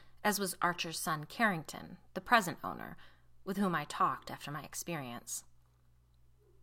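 No technical faults can be heard anywhere in the speech.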